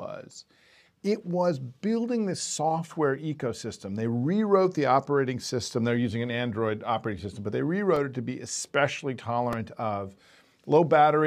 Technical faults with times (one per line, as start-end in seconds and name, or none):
7.96 repeated buffer
9.53 repeated buffer